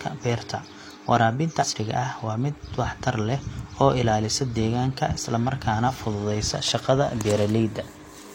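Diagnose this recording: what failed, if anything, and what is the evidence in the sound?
A glitch at 1.58 to 1.65 s, just before "ah waa mid waxtar", where the speech jumps ahead by roughly 150 ms. At the codec stage, compressed frames were skipped: about three frames, fitting 46.4 ms frames, were missing or rejected.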